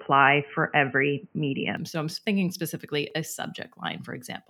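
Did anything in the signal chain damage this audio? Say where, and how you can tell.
Yes. Up to 1.77 s the audio is dull and boxy, with nothing above 3.1 kHz. It then opens out with no gap and a level step of about 5 dB. This is likely an input switched to a poorer device at the driver stage. A spectrogram shows a hard 3.1 kHz ceiling that stops abruptly at 1.77 s.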